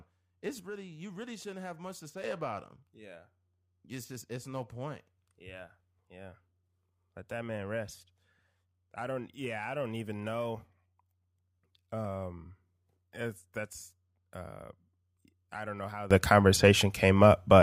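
A sudden gain jump at 0.60 s drops speech and background together by about 6 dB until 2.24 s; another at 16.11 s raises both by about 19 dB to the end. Both are likely a gain step applied without a ramp.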